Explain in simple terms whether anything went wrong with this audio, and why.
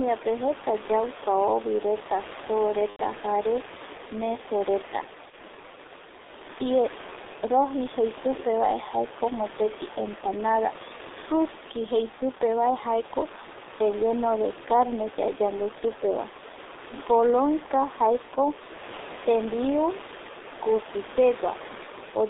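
The G.723.1 codec was used throughout. This old internet-phone coder cuts out high sounds and tracks the voice coarsely, so speech sounds muffled and hoarse, not merely thin like a narrow phone line.

VoIP packet loss concealed by the speech codec occurs at 2.90–3.00 s and 5.30–5.34 s. Missing pieces were filled by stretching the previous sound into a fading buzzy tone or noise, and in the longer first gap the end goes silent.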